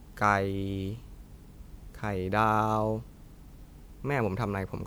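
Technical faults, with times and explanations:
Throughout: generation loss. The speech has a swirling, hollow, smeared character and softened consonant attacks, more degraded than a single encode would leave. This points to an MP3 chain at about 128 kbit/s. The cause is likely repeated lossy re-encoding, roughly three passes. Each decode and re-encode quantises the signal afresh on a shifted frame grid, so the noise and spectral holes from every pass stack up instead of staying at one codec's level.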